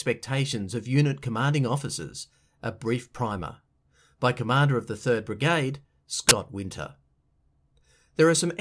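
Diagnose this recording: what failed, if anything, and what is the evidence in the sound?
Storage or file-parsing stage: file tags played as audio. At 6.29 to 6.31 s the speech is cut by a hard-edged burst of very loud white noise. That's an embedded cover picture, compressed data, being read straight into the decoder as if it were samples.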